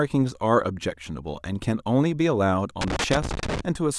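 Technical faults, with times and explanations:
2.81 to 3.61 s, loose connector crackle: the speech breaks into an irregular burst of scratchy crackle lasting about 0.8 s, with the sound stuttering in and out under it. A worn or dirty contact somewhere in the cable or jack is shifting, so the circuit keeps opening and closing in rapid, uneven succession. Each break chops the signal, and any DC sitting on the line jumps at every reconnection, adding sharp pops to the scratching.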